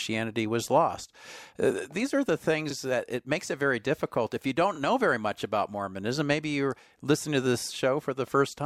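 Right after "these are the", around 2.70 to 2.74 s, repeated frames replay a 32 ms chunk (likely one compressed frame) once, a quick stutter lengthening the speech by 32 ms.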